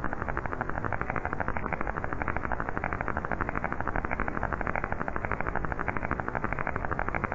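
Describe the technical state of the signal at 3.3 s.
At 3.3 s the signal is intact, with no audible fault in the sound at that moment.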